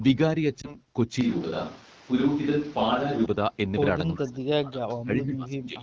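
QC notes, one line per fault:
0.62–0.76 s, lost AMR speech frames: a brief dip and warble as the decoder patched a gap that fits a single lost 20 ms frame by reusing the last good settings.
1.21–3.26 s, switch to a distant microphone: the voice abruptly turns roomy and hollow with thinner bass, at roughly the same level, with room noise about 25 dB below speech, likely from losing the close microphone.
4.16–4.85 s and 5.02–5.82 s, speech suppressed in double talk: the voice dips by up to about 25 dB, likely as the echo canceller damped both sides while they overlapped.
4.26–4.30 s, echo leak: a faint delayed copy of the voice, arriving 386 ms late and about 30 dB below speech, likely where loudspeaker pickup slipped past the echo canceller.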